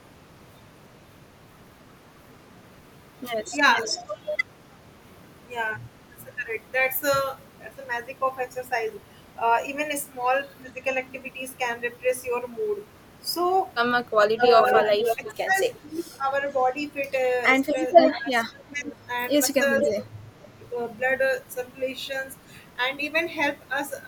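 At 3.73 to 4.06 s an echo leak appears. A copy of the speech returns 440 ms late, about 10 dB below the original. The far end's echo canceller likely missed part of its loudspeaker pickup.

From 14.22 to 15.78 s a louder echo leak follows, 489 ms late and only about 5 dB down. It likely has the same cause. It recurs at 17.63 to 18.12 s and briefly at 19.8 to 19.92 s.

Speech suppressed in double talk overlaps this from 14.37 to 16.27 s. The talker dips by up to about 15 dB across roughly a second. From 18.1 to 20.37 s it dips again, up to about 20 dB, over about a second and a half. An echo canceller likely confused the talker with echo during overlapping speech and turned both down.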